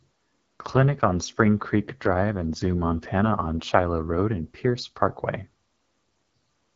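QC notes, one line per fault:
Throughout: AMR wideband (HD Voice) codec. The speech sounds rough and raspy, which fits one of the codec's lowest bitrates, around 8.85 kbit/s. Content stops at about 7.6 kHz, and the top band above roughly 6.4 kHz is hiss-like filler rather than real detail. That wider band and synthetic noise fill separate it from narrowband phone coding or a simple low-pass filter.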